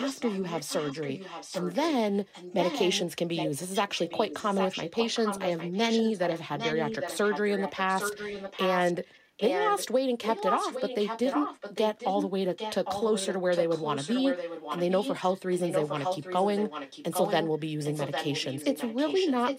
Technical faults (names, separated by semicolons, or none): echo leak